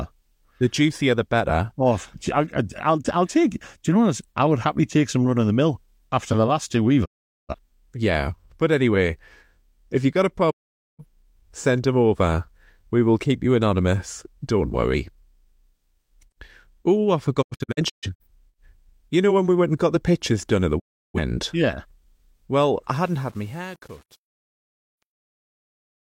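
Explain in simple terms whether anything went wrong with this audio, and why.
The speech cuts out four times. These are digital broadcast dropouts. The receiver lost good data, so it muted for a moment. Each cut fades to silence in about 20 ms. The first comes at 7.04 to 7.55 s, right after "the last two we've". The second runs from 10.50 to 11.04 s, after "if you got a", and the sound returns at "send them over". From 17.41 to 18.26 s there are several short holes, the longest about 0.13 s. The last is at 20.78 to 21.18 s, after "pictures done at the". Whatever was said in those gaps is gone.

The ending also has a problem. The clip fades out from about 23 s. But from 22.93 s to the end there is truncation distortion on a fade. The fade was done with only about 7 bits of detail and no dither, a faint noise that normally hides the steps between levels. As the sound gets quieter, the wave breaks into coarse steps. 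From 23.05 s onward it sounds gritty.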